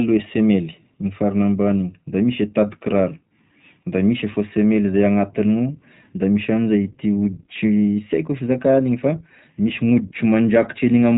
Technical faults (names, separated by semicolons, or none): iLBC codec